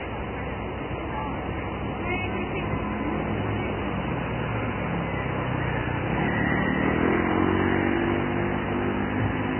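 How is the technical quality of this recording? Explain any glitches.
Quality is poor throughout, with heavy Vorbis compression damage. From start to finish nothing is present above 3.1 kHz, which fits a very low bitrate of roughly 11 kbps. The likely cause is an encoder that spent too few bits on the treble, so it quantised what remained so coarsely that fine detail turned into hiss and grain, with roughened tones and smeared attacks. On a spectrogram this shows as a flat ceiling at 3.1 kHz and blotchy, noisy texture beneath it.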